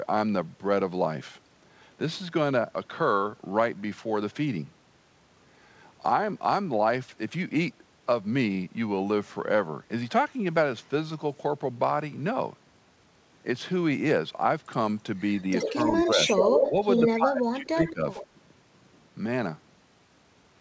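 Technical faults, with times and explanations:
15.59–16.70 s, 16.96–17.20 s, 17.86–17.93 s, 18.14–18.25 s: echo leak. A copy of the speech trails the original by 77 ms. It is about as loud as the talker at first, falling to about 5 dB and then about 15 dB below. The likely cause is a far-end loudspeaker echo that the echo canceller did not fully remove.
15.66–16.19 s, 16.69–16.77 s, 17.16–18.06 s: speech suppressed in double talk. The talker's level dips by about 5 dB in short patches during the first two spans. In the third, it drops by up to about 20 dB over roughly 0.7 s. This likely comes from the echo canceller turning down both sides while they overlapped.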